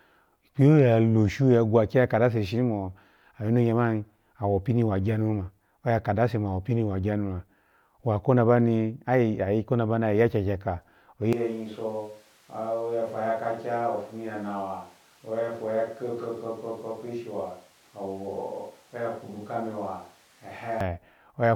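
At 11.33 s the speech abruptly turns roomy and hollow, loses bass, and drops roughly 10 dB, with room noise rising to around 30 dB below the speech. It stays that way until it snaps back at 20.81 s. This is a switch to a distant microphone, likely because the close mic's signal dropped out and a farther one took over. A simple gain dip would stay dry and keep its bass, and a fade wouldn't jump like this.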